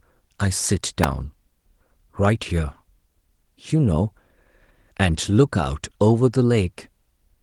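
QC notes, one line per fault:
1.04 s electrical switching spike. A sharp snap or tight cluster of clicks lands on top of the speech and lasts only a few milliseconds. A nearby switch or motor likely arced, and the audio line picked it up. The Opus voice compression around it still reaches about 20.2 kHz.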